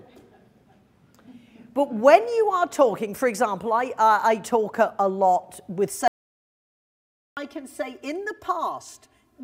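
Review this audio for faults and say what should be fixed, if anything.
Channel delay (comb filtering) from 5.89 s to the end: one channel runs about 3 ms behind the other, and when the two are summed to mono, shared content cancels at evenly spaced frequencies starting around 150 Hz. This leaves the sound hollow and phasey, with fixed notches. Prevent it by aligning both channels to the same clock and buffer before summing.

Audio dropout to silence from 6.08 s to 7.37 s: the sound cuts out for 1.29 s into silence with no room tone, then returns mid-flow. Whatever occurred in that gap is lost. The likely cause is an interrupted input link or device that the recorder kept writing silence through. Prevent it by securing connections and monitoring input levels during capture.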